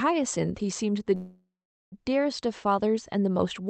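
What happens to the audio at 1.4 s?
At 1.4 s the sound sits inside a call audio freeze running from 1.15 to 1.94 s, most likely because packets stalled in transit and the jitter buffer ran dry. The receiver stretches the last sound into a fading buzz or hiss that drops to silence for about 0.43 s. When packets arrive, the speech resumes exactly where it stopped, so nothing is lost, but everything after it lands about 0.77 s late.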